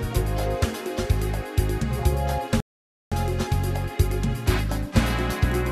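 At 2.60 s the sound drops abruptly into silence and picks up again at 3.12 s exactly where it broke off, with nothing skipped. That is a rebuffering stall: the player exhausted its downloaded audio and waited for more, adding 0.51 s.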